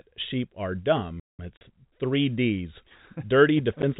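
A speech clip carried over what sounds like G.711 telephone coding, with its 4 kHz ceiling. At 1.20 s the player most likely ran short of data or had its thread held up, and this playback stall silences the output for about 190 ms. The speech breaks off mid-flow and resumes at 1.39 s. Soon after, packet loss filled with silence leaves a hard-edged 40 ms gap from 1.57 to 1.61 s. Its length fits four consecutive 10 ms packets dropped, each replaced by silence. A second loss of the same kind cuts a single 10 ms hole at 3.82 s, where the audio blinks out and returns.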